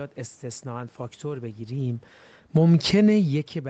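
Automatic gain falling runs from 1.70 s to 3.38 s. The gain control judged the input too loud or its background noise too strong and eased its gain down gradually, by about 4 dB over that stretch. The speech and the room noise behind it sink together, which separates this from the talker's own movements around 1.5 s and 3 s, where only the voice changes level. The slow, even slope with no sudden step is typical of this kind of gain control.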